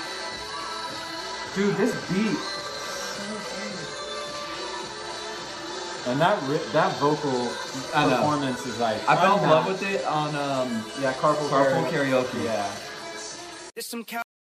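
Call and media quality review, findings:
Tiny skip at 1.93 s and 13.91 s. Overlap between stream segments: timestamps of adjacent segments, about 6 s long, overlap, so the player trims real audio (about 9 ms and 5 ms) and the waveform jumps at the splice.

Sound halts abruptly at 14.22 s, dropping straight to digital silence with no decay. Cut-off end: the final buffers were never written or played out, so playback stops mid-sound and the last 0.3 s is missing.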